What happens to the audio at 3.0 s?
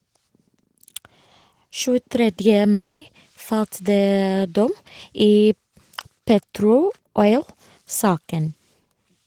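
From 2.73 to 3.03 s the speech gives way to a fading buzz, likely a long network dropout: about 280 ms was lost and concealed, then audio resumes further on without the lost part.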